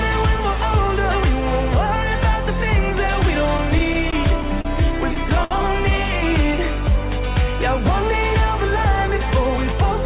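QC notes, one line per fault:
3.58–4.67 s, repeated stalls (stutter): six gaps totalling 87 ms, the longest 32 ms. Packets kept arriving late, so the jitter buffer ran dry and the last sound was extended each time. On a spectrogram, short frozen smears appear under the 4 kHz ceiling.
5.44–5.53 s, short stall from a late packet: one packet missed its slot, so the receiver held the preceding sound for 61 ms and then resumed exactly where it left off, adding 61 ms of delay. The waveform shows repeated-looking stretched cycles, and the spectrogram shows a brief flat band.
8.72–9.73 s, jitter buffer speed-up: a backlog of buffered audio was trimmed by cutting out pitch-period slices, roughly 50 ms in total, so this second runs about 5% fast at unchanged pitch and sounds hurried. Harmonics keep their frequencies while events sit slightly closer together on the spectrogram.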